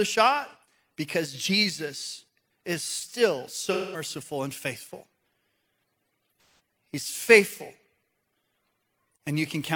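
Two AAC frame losses with concealment occur, at 3.67–4.04 s between "is still" and "and faithful" and at 6.34–6.59 s. The decoder patches each gap from the last good spectrum, so the sound turns smeared and noisy.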